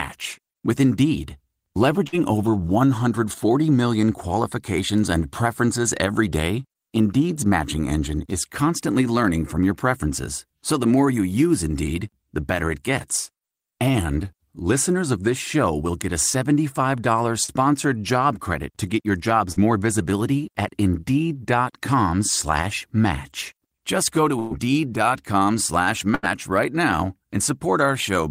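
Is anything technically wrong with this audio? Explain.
Yes, the speech has dropouts from lost network packets.

Bursts of packet loss occur at 2.07 to 2.18 s, at 24.39 to 24.54 s just after "go to", and at 26.15 to 26.26 s just before "right now". In each, roughly 40, 120 and 80 ms of audio never arrived. The receiver stretched the last sound and faded it, giving a brief held buzz or fading hiss before the speech resumes with a piece missing.

Short concealed packet losses occur at 17.44 to 17.51 s and at 19.52 to 19.59 s, between "credit to get your" and "more visibility at". About 40 ms went missing each time, and the decoder patched the gap by extending the previous sound, leaving a quick smear or wobble.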